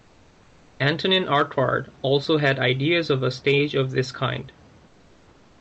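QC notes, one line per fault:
0.00–0.79 s and 4.87–5.61 s, comfort noise in place of the background: the room sound in both pauses, at the start and again right after "stage of this kind", turns into a smooth, featureless hiss sitting about 33 dB under the loudest speech and about 4 dB and 3 dB quieter than the real background. The sender likely stopped transmitting during silence with Opus DTX, so the receiver filled the gaps with synthetic noise.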